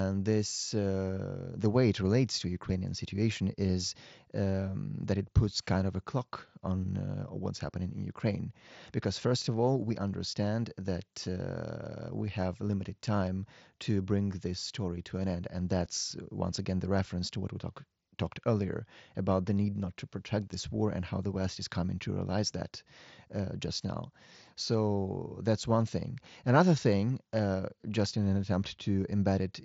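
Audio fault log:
15.85 s concealed Bluetooth headset packet loss: one lost packet of about 7.5 ms, which fits a single mSBC frame, was filled by repeating matching recent waveform, so it is nearly inaudible.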